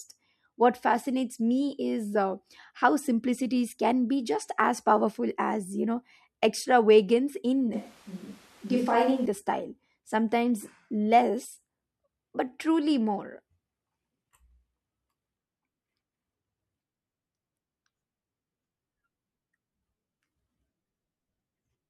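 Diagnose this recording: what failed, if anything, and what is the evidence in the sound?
From 7.73 s to 9.26 s, between "you know extravagance in" and "the style sometimes less", the speech turns roomy and hollow with thinner bass, then snaps back. This is likely a switch to a distant microphone at the capture stage. The level barely changes, but room noise rises to about 30 dB below the speech. The abrupt change at both ends, and the added room noise, rule out gradual processing like reverb or an EQ change.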